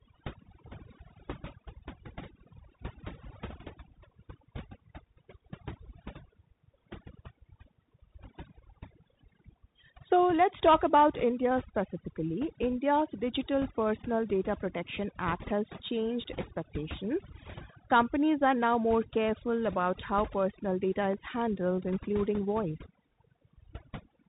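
From start to finish, a noise reduction stage has been pushed far too hard, an overdone noise removal setting that shuts off any frequency band near its noise estimate. Quiet detail in the speech vanishes with it, leaving near-silent gaps flecked with twinkling specks.

Throughout, the speech also passes through a Bluetooth CVSD headset codec, which encodes only an up-or-down step per sample, fitting a 64 kbps link. Everything above about 3.8 kHz is gone, s sounds come out scratchy, louder high content distorts, and a plainly audible granular hiss sits beneath the voice.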